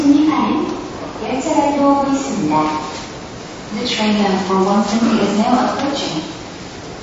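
From start to finish there's plainly audible MP3 compression, likely from a starved encoder. Nothing sits above 7.6 kHz, which fits a bitrate around 32 kbps, so the top end is gone. Weak detail flickers between frames, giving a watery, swirly smear.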